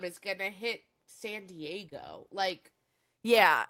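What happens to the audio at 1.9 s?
At 1.89 s a short stretch of the call, about 20 ms, never reached the decoder in time, a short concealed packet loss. The receiver papered over the hole by extending the preceding speech, carrying its pitch forward if voiced or filling with shaped noise if not, before blending back into the real signal at 1.93 s. What you hear is a brief smear or wobble rather than a dropout, and a short consonant there can disappear.

Straight after, from 1.93 to 2.07 s, further packets were lost but recovered as a lost packet rebuilt from error correction. Each following packet carried a low-bitrate backup of the missing one, and the decoder played those backups. The 80 ms rebuilt this way fits about four 20 ms packets. There is no gap, but that span of speech sounds rougher and noisier than the audio around it.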